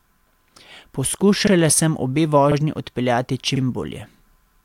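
Overlapping chunks at 1.47 s (before "sem obe"), 2.52 s (after "sem obe") and 3.56 s: each 1.0 s chunk starts early, replaying 44 ms and producing a regular stutter.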